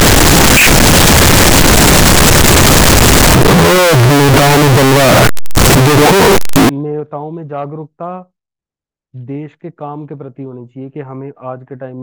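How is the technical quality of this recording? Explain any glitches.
Poor for the first part of the recording: from the start to 6.69 s the speech is buried under extremely loud, harsh distortion, and even the quiet gaps between phrases blare at nearly full level instead of falling away. The likely cause is signed and unsigned mixed up. The 16-bit samples appear to be read with the wrong sign convention, flipping the top bit, so every zero crossing becomes a jump from one extreme of the range to the other and silence becomes as loud as the strongest sounds.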